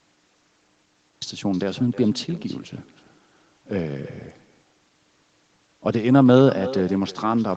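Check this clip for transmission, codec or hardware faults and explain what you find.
Two faults stand out: an echo that runs through the whole clip, and a cut-off start.

The cut-off start comes first. The clip holds digital silence from 0.0 to 1.22 s. At 1.22 s the speech appears mid-sound. There is no natural attack and no fade-in. The capture or stream began late, after the talker was already speaking. The opening of that first sound is simply missing, so the entry is abrupt and unnatural.

The echo with no canceller lasts the whole clip. Each phrase is followed about a third of a second later by a fainter copy. That copy sits about 18 dB below the direct speech. It sounds thinner than the original. The far end is playing the call on a loudspeaker, and its microphone picks it up again. Nothing cancels that return, so it travels back over the network and shadows everything said. The top end stops at 8 kHz, which fits the call's microphone processing and an Opus call path, both working normally.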